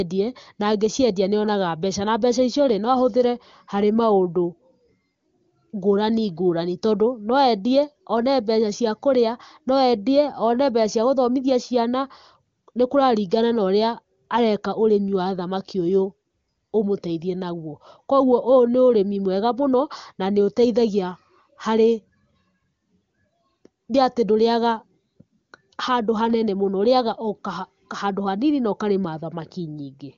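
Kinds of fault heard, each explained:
Nothing stood out on listening to this speech.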